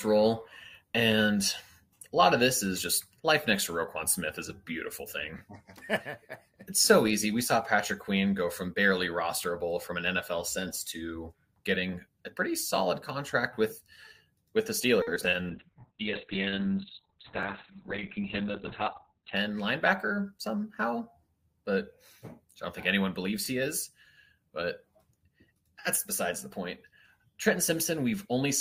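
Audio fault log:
5.39, 11.41, 17.43 and 23.45 s: overlapping chunks. Processing in 6-second chunks that each begin 23 ms early replays that sliver at every join, giving a regular click or stutter.
15.02 to 15.48 s: repeated packet loss (robotic sound). Four gaps, the longest 50 ms, are patched by extending earlier sound, so about a quarter of this stretch turns choppy and robotic.
15.50 to 19.42 s: call bitrate drop. The encoder falls from 64 to 6 kbps and bandwidth narrows from 20 kHz to 4 kHz, so the sound turns muffled and rough for nearly four seconds.
17.10 to 17.76 s: jitter buffer speed-up. The receiver trims an excess backlog by cutting roughly 40 ms of short pitch-period pieces, so the sound runs about 5% faster at unchanged pitch.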